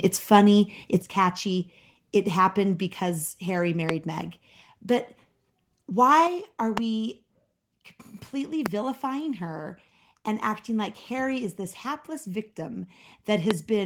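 At 1.02 s the whole level drops by about 7 dB in one step, speech and background together. That's a microphone volume stepped down: the call software likely judged the input too hot and pulled the device's input volume down in a single move. It's a sudden sag in loudness, not a fade. Nothing is cut, the sound just sits lower from there on.

At about 3.9 s there's a loud pop, a single sharp click riding on top of the speech, which carries on underneath it undisturbed. It's roughly 20 dB above the surrounding sound. This is likely a voltage spike entering the chain from a plug, a switch, static or a driver hiccup, which the downstream circuitry turns into a short, hard transient.

At 6.27 s there's a second microphone volume step down, this time by about 5 dB, again likely the software reacting to a level it thought was too high. You hear it as another abrupt notch down in loudness.

More loud pops follow at 6.78 s, 8.66 s and 13.51 s. 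Each is a single hit, and these are stronger, roughly 25 dB over the speech, so they really jump out.

At 12.9 s the opposite happens: a microphone volume stepped up, with the level rising by about 3 dB at once, speech and background lifting together. Here the call software decided the mic was too quiet and bumped the input volume up in one jump.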